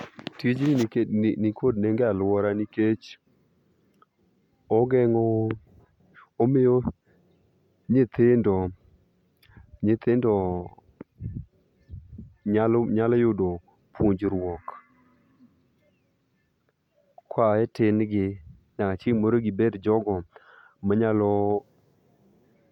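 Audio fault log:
Nothing to log here; I listened all the way through this bit of speech and didn't catch a single fault.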